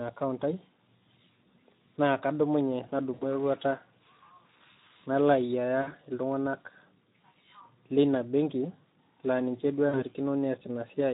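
The speech runs through the Speex codec at a low setting, around 11 kbps by the sound of it, which leaves too few bits for the excitation. The result is plainly audible throughout: a noisy, hoarse texture.

VoIP packet loss concealed by the speech codec occurs at 3.13 to 3.44 s, 5.82 to 5.94 s and 9.89 to 10.04 s. Each time, packets went missing and the decoder extrapolated from its last frame, fading the sound out. The gaps cover about 80, 60 and 40 ms, and the voice stays weak a little beyond each one.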